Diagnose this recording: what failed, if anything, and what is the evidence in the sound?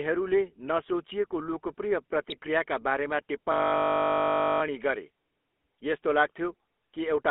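The codec stage is a GSM full-rate speech coder. The whole clip has the gravelly, buzzy texture of a pulse-excited vocal-tract model, which fits the 13 kbps full-rate codec, and the speech sits in a narrow band from about 250 Hz to 3.5 kHz.

GSM bit errors corrupted the decoder's frame parameters on the radio link. From 2.28 to 2.38 s, bad filter, pitch or gain values distort the spectrum and level for a few frames, and the speech briefly squawks and gargles.

A system hang loop occurred at the driver or buffer stage. The host stalled while the audio hardware kept replaying its ring buffer. From 3.52 to 4.62 s, one 20 ms slice repeats about 55 times, which sounds like a steady 50 Hz buzz and fits a buffer of about 20 ms.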